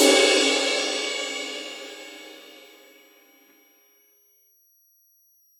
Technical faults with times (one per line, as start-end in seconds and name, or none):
0.00-5.60 switching supply whistle